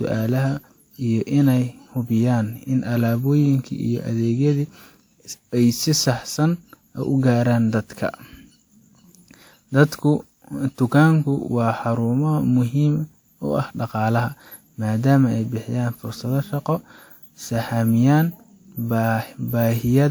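Generation loss runs throughout, likely from the speech passing through a WMA-style lossy codec about five times, at what sounds like 128 kbit/s. Each re-encode adds fresh quantisation error, leaving a swirly, hollow, smeared sound with softened attacks and nothing above 20.1 kHz.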